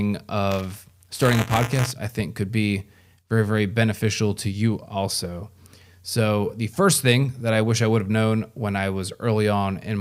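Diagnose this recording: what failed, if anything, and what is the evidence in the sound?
The driver's ring buffer failed. Writer and hardware read pointer slipped into each other, so buffer tearing splices a small sliver of audio from roughly 20 ms earlier into every period. From 0.51 to 1.92 s, just before "I think could be", the speech carries a rattling 188 Hz buzz, which fits a 256-sample buffer.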